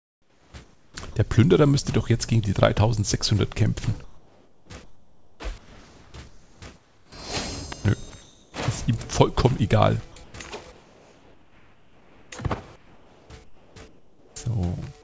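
From 0.00 to 1.16 s the sound is chopped by the voice detector, likely from a sender repeatedly gating its output: about 0.9 s is swapped for comfort noise, so the waveform flickers between real detail and flat synthetic fill.

At 2.43 s and again at 7.72 s an electrical switching spike, likely from a nearby switch arc, snaps through as a sharp click, a vertical full-band line on a spectrogram.

From 4.04 to 7.12 s there is comfort noise in place of the background, likely because transmission stopped during a pause. The textured background becomes a smooth, featureless hiss, an even grey band on the spectrogram, cut off at 8 kHz like the rest of the call audio.

At 8.10 s a 20 ms piece of sound is dropped by the voice detector, likely misjudged as background. It leaves a brief hole of steady noise where the waveform's envelope should continue.

The same featureless fill returns at 8.10 to 8.54 s, 10.24 to 10.34 s (about 3 dB quieter), 10.72 to 12.32 s (about 4 dB quieter) and 12.76 to 14.36 s. 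Each shows up as a loss of fine texture.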